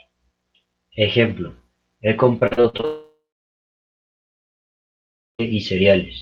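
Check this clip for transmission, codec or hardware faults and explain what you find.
Two transmission faults occur back to back in the middle of the speech, both on the receiving side of a call path whose band-limited sound, topping out near 12 kHz, fits an Opus stream at around 32 kbps.

From 2.39 to 2.85 s there is repeated packet loss with a robotic sound. Seven short gaps, the longest 41 ms, are each patched by extending the preceding audio, so roughly 43% of that stretch is synthetic fill. The result is choppy, robotic speech with fragments missing.

From 2.85 to 5.41 s a long network dropout likely occurred. The concealment first prolongs the last sound as a fading buzz or hiss. Then about 2.2 s of silence follows before the speech resumes, with the intervening audio, over 2.5 s, never played.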